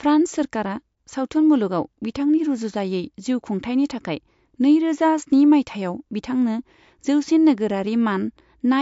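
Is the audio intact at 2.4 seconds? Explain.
No. At 2.4 seconds, as across the whole speech clip, the audio shows what is likely MP3 compression at a low bitrate, with damage that sounds consistent with roughly 54 kbps. Starved of bits, the encoder has cut the treble outright, leaving nothing above 7.6 kHz, and drops weaker frequency lines that flicker in and out between frames. The result is a dull, band-limited tone with a watery, swirling texture, metallic chirps on s sounds, and smeared attacks.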